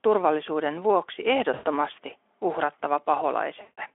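VoIP packet loss concealed by the speech codec hits this speech clip at 1.53–1.70 s, just after "turvallisuuden vuoksi", and at 3.61–3.79 s. There, the decoder stretches its last pitch and filter into a fading buzz across gaps of about 120 and 160 ms, heard through a narrowband Speex line.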